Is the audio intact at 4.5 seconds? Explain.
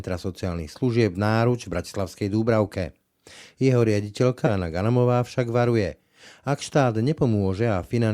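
No. At 4.46 s the speech jumps abruptly forward, marked by a brief blip. A stretch of the programme is simply gone. This is likely a stream segment skipped: one segment failed to load, and the player carried on with the next.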